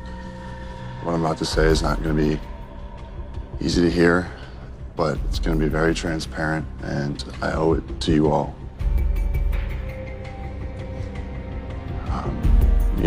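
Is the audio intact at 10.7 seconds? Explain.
Yes, at 10.7 seconds the audio plays through intact, with no dropout, click, distortion or other fault at that point.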